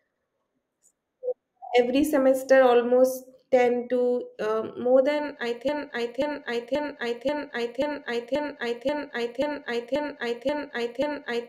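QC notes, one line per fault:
5.69–11.48 s, broken-record loop: the player or stream likely stalled just after "um more than i" and kept resending its last held fragment. A 0.53 s piece repeats exactly, back to back, 11 times until the end, and the audio meant for that stretch is lost.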